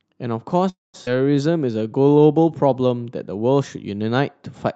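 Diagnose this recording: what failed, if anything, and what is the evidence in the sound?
At 0.69 to 0.96 s the speech stops and the last sound carries on briefly as a fading buzz or hiss, then about 180 ms of silence, before resuming where it left off. This call audio freeze is likely network delay draining the jitter buffer, inserting a gap.

At 1.06 to 1.09 s playback jumps forward: roughly 150 ms of speech is gone and the two sides are butted together almost directly. This skip ahead points to packets dropped in transit or discarded when the jitter buffer overflowed.

From 1.17 to 2.22 s the speech runs at 87% speed with unchanged pitch, sounds drawn out. This jitter buffer slow-down repeats pitch periods to add about 148 ms and rebuild its reserve, audible through the Opus path's 8 kHz bandwidth.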